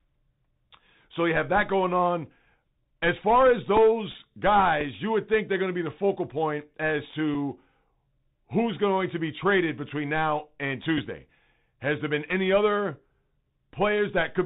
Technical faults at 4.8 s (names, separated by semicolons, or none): Bluetooth CVSD headset codec; Bluetooth headset packet repeated